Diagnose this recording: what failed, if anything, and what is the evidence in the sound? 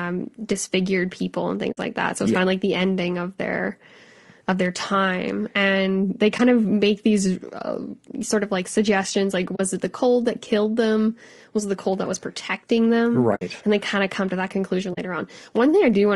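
Codec stage: throughout, the speech is rough and grainy, likely from low-delay AAC compression near 32 kbps. A spectrogram shows noise smeared between the harmonics.

Converter clocking: clock slip clicks tick about every 0.4 s from 0.33 to 15.8 s, likely single-sample slips from drift of roughly 50 ppm. They show as thin vertical spectrogram lines.

Network: AAC frame loss with muting leaves gaps at 1.71, 6.37, 9.55, 13.35 and 14.93 s, lasting 60, 20, 40, 60 and 40 ms. The decoder zeroes the lost frames, so the waveform fades into blank spectrogram columns.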